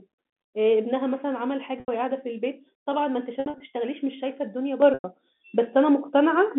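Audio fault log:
1.80–1.88 s, 3.40–3.60 s and 4.94–5.04 s, packet loss with pitch repetition: each gap starts as a brief buzzy hold on the last sound before it, and the longer ones then fade into silence until the speech returns. At 1.8 s about 80 ms goes missing, and at 4.94 s about 100 ms, both bridged by repeating the last pitch period and fading it. The 3.4 s event is several short drop-outs spread over 200 ms, none longer than 60 ms.
4.82–6.59 s, sudden gain jump: the level steps up by about 7 dB in one instant and stays there to the end, with the telephone-band background noise rising right along with the speech rather than the talker getting louder. Because the change lands without any ramp, it is likely a digital gain setting or bit shift applied abruptly in the chain, not anything at the microphone.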